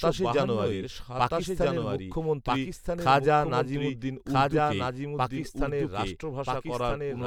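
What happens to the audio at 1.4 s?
At 1.4 s, as throughout the clip, the speech is accompanied by a second, fainter copy of itself lagging about one and a half seconds behind and roughly 5 dB quieter. It is a clean, full-band repeat with no reverberant tail or room colour, so it sounds like overlapping playback rather than an echo. This doubled audio track likely comes from the same signal being mixed in twice, either captured again through a slower path or left as two misaligned copies in an edit.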